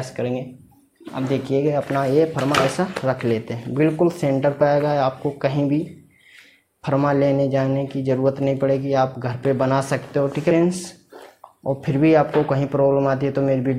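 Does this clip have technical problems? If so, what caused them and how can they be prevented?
Yes. Damaged data in a compressed stream appears from 1.07 to 1.09 s as a brief glitch lasting about 20 ms. Part of the encoded stream arrived corrupted, with bytes dropped, zeroed or overwritten. The decoder could not interpret those frames correctly, so it lost its place in the stream and had to search for the next valid frame header before clean audio resumed. To prevent it, transmit or store the stream with checksums or error correction and verify file integrity before decoding.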